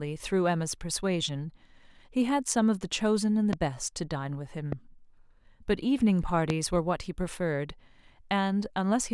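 Three loud pops hit this speech clip, at 3.53 to 3.55 s, 4.72 to 4.75 s and 6.50 to 6.52 s. Each is a single sharp thump, about 15 dB above the speech for the first and last and about 10 dB for the middle one. The likely cause is a sudden voltage pulse, from a plug, a switch or static, added to the signal. Unlike a dropout, the speech carries on underneath each pop without a gap.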